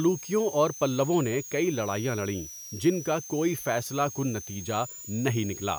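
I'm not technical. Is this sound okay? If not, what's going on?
No. A power supply in the recording chain is whining at a rate we can hear, a switching supply whistle. Throughout the speech, a thin, high whistle around 6 to 7 kHz sits on top, shifting in pitch.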